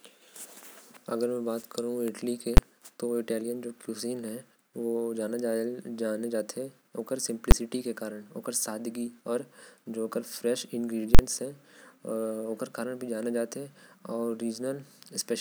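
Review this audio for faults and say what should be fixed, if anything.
Invalid numbers at full scale: single bangs at 2.57 s and 7.51 s, then a 43 ms burst from 11.15 to 11.19 s, where infinite or invalid values pinned the output at one extreme for a whole processing block. The short bangs last about 11 ms, which fits a 512-sample block, and the longer burst fits a 2048-sample block. Unlike clipping, the sound is not pushed too hard. The signal is replaced entirely, so each event is a flat slab at one extreme value lasting exactly one block. To prevent it, check processing output for infinite or invalid values and replace them with silence before they reach the output.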